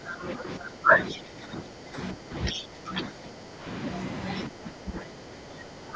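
A speech recording whose level dips by about 10 dB at 0.0–0.9, 1.13–1.97, 2.13–2.34 and 2.52–3.65 s, and by about 15 dB at 4.48–5.95 s. This is speech suppressed in double talk, likely an echo canceller ducking the talker while the far end also spoke. A second, fainter voice, roughly 5 to 10 dB below the talker, slips through at 0.08–0.32, 1.09–1.18 and 2.51–2.63 s. This is the other side's voice leaking through, likely loudspeaker echo left uncancelled.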